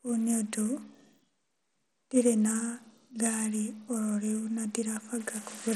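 Throughout the speech, the treble stops dead above 13.1 kHz and a gritty, aliased grain rides on the sound, plainly audible. This points to Bluetooth SBC compression, likely at a low bitrate near 80 kbps, where the top sub-bands get almost no bits and the remaining bands are coarsely quantised.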